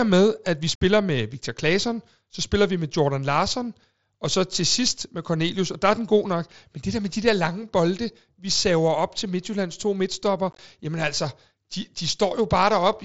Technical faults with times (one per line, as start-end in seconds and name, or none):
0.75-0.81 unconcealed Bluetooth headset packet loss
10.51-10.59 unconcealed Bluetooth headset packet loss